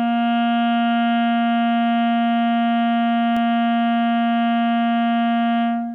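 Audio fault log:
3.37 s, electrical switching spike: a single sharp snap, about a millisecond long and peaking at roughly -20 dBFS, sits on top of the music without interrupting it. The likely cause is a nearby switch or static discharge arcing and being picked up by the audio line. What separates it from a digital dropout or buffer glitch is that nothing is removed or repeated. The music runs straight through underneath, with only an extra burst added.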